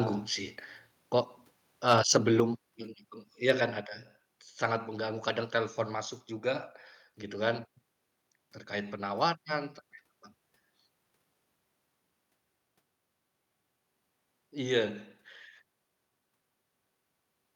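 Microphone overload in this speech recording occurs from 1.88 to 2.40 s, just before "yang itu iya kan", peaking about 7 dB over full scale and flattening around one percent of samples. It recurs from 3.49 to 3.51 s, between "yang itu iya" and "kan ada", about 2 dB over, with roughly three percent clipped. The likely cause is input gain set too high, so the converter shears the waveform tops and adds a harsh crackle. A microphone volume step-down follows at 2.40 s, cutting the level by about 5 dB right after the first overload, and again at 3.72 s, just after "yang itu iya kan", by about 2 dB. Voice and background drop together in a single jump, likely because the call software's automatic gain control reacted to the clipping by lowering the device's input volume.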